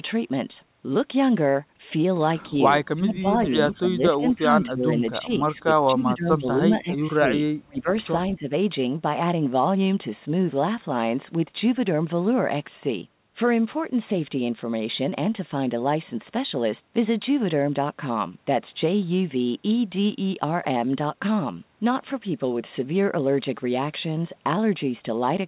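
The speech dips at 2.43–2.74 s (about 5 dB), 2.95–7.32 s (about 15 dB), 7.65–7.93 s (about 30 dB, nearly gone) and 8.16–8.52 s (about 15 dB). This is likely speech suppressed in double talk: the echo canceller turned down overlapping speech it mistook for echo.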